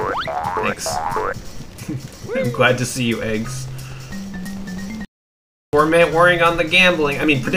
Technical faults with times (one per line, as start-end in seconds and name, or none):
5.05-5.73 playback stall